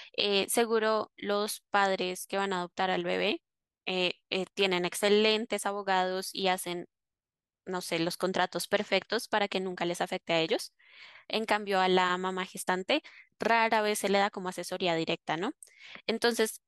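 From 0.16 s to 16.64 s the speech carries clock slip clicks: a faint, regular ticking roughly every 70 ms that merges into a soft rattle. The likely cause is two unsynchronised clocks about 300 ppm apart, with each slip dropping or repeating one sample.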